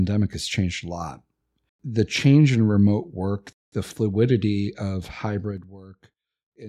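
At 0.33 s, just before "has changed a lot", a block of digital silence drops the speech to silence for about 2.4 ms. Its abrupt edges make a single tick rather than an audible hole.

From 5.42 to 5.76 s, after "work the fluidity of", zipper noise appears as the level falls about 15 dB in 3 dB steps, roughly fifteen per second. Each step clicks.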